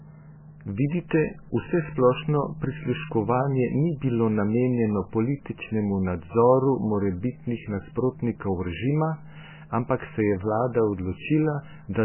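Throughout, the speech sounds watery and swirly, with nothing above 3 kHz, which points to heavy MP3 compression at a likely very low bitrate, near 10 kbps.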